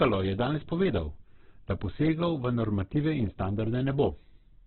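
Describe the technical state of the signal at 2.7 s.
Opus compression is present at 2.7 s, as it is across the whole clip. The speech there is heavily degraded in a way that is likely due to a very low-rate Opus encode in its music mode, consistent with roughly 8 kbps. With so few bits, the encoder keeps each band's overall energy but fills the fine detail with folded or noise-like content, so the speech sounds rough and grainy rather than swirly. The bandwidth is narrowed to telephone width, with nothing above about 4.4 kHz, which adds a muffled, closed-in quality.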